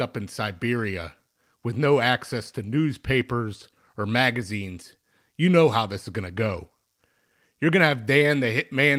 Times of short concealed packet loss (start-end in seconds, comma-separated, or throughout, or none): 8.19-8.23